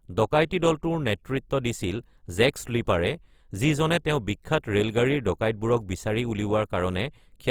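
Throughout the clip, the speech sounds grainy and rough. Voiced tones turn noisy and hissy. Content still reaches 20.3 kHz, so nothing is muffled. The likely cause is Opus compression in CELT mode, filling starved bands with noise, consistent with about 24 kbps.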